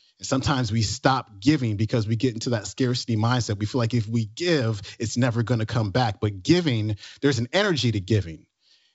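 Nothing goes wrong anywhere in this speech recording; it sits comfortably in G.722 wideband telephone coding, with the bandwidth reaching up toward 7 kHz, which fits the full 64 kbit/s mode.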